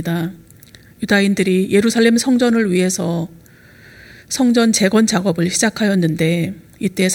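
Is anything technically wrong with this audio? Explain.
No, nothing is technically wrong.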